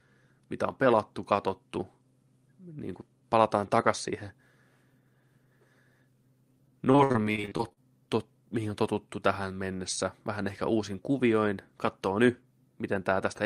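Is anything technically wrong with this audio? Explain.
Yes. Between 6.91 and 7.78 s, just before "tot mihin on totuttu", there is repeated packet loss (robotic sound). Around a dozen short dropouts, the longest about 58 ms, come in quick succession. Each one is papered over by extending the preceding sound, covering roughly a third of the stretch, so the speech turns choppy, with pieces missing. On a spectrogram, harmonics freeze into flat, smeared bands between abrupt cuts. The waveform shows stuttering, repeated-looking segments.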